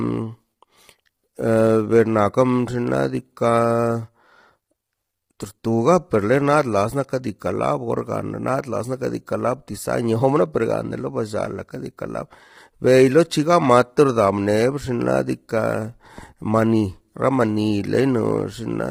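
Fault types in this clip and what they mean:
Low-delay AAC compression: the speech sounds rough and grainy throughout, with noise filling the gaps between harmonics and a thin, synthetic top band, likely from AAC-ELD at around 24 kbps. Unlike background hiss, the grain follows the voice and vanishes between phrases.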